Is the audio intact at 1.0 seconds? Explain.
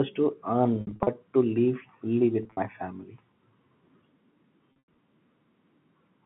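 No. From 0.81 to 1.07 s, just before "to live fully", the sound turns briefly buzzy and held, with short gaps. This is packet loss with pitch repetition: about 160 ms went missing across that stretch, the longest run 60 ms, and the receiver bridged each gap by repeating the last pitch period.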